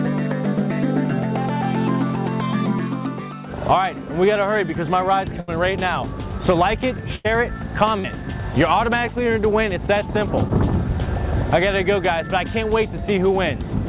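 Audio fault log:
5.40–5.50 s and 7.16–7.29 s, burst of packet loss: several packets in a row failed to arrive in time, so the receiver stretched the last sound for about 75 ms and 90 ms while fading it down. Playback then picks up again with roughly 80 ms of audio skipped each time, heard as a held, dimming sound followed by a jump.
8.00–8.06 s and 10.48–10.51 s, short concealed packet loss: brief holes of about 40 ms and 20 ms were patched by extending the preceding sound for 45 ms and 12 ms and then blending back into the real audio. The result is a quick smear or wobble in the telephone-band sound, which has nothing above 4 kHz.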